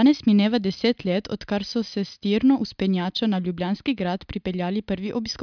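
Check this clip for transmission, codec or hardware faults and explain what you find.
Nothing stood out on listening to this speech recording.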